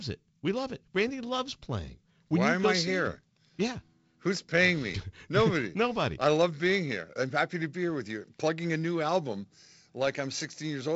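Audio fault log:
No fault to log for this speech audio.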